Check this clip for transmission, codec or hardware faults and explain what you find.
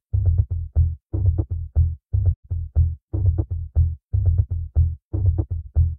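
Two brief soft-edged dropouts interrupt the sound, at 2.31 to 2.45 s and again at 5.60 to 5.66 s. The first fades out, stays silent, then fades back in; the second is a brief dip. This is AAC frame loss with muting. The decoder received nothing for those frames and set their spectrum to zero, and the overlapping windows smoothed the edges. The first hole is about 128 ms long, which fits three lost frames. The second, about 43 ms, fits one.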